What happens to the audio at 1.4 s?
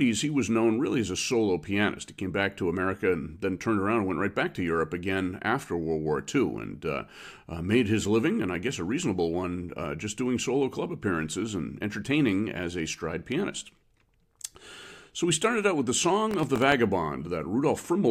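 Nothing goes wrong at 1.4 s; the speech carries on intact through that moment with no audible fault.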